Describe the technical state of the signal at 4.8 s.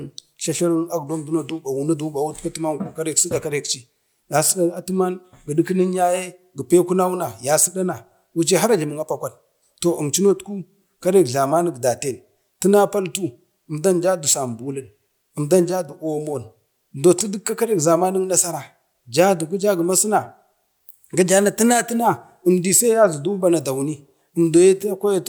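An electrical switching spike sits from 4.77 to 4.79 s. A sharp snap, peaking around -25 dBFS, lands on top of the speech. A nearby switch or discharge arcing into the line is the likely cause.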